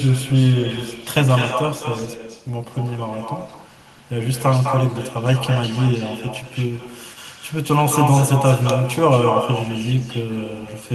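From start to finish the speech is shadowed by echo with no canceller: the far end's loudspeaker feeds its microphone, and the returning copy trails each phrase by around a fifth of a second at about 10 dB down. Unlike room reverberation, it is a distinct, thinner repeat rather than a smooth tail.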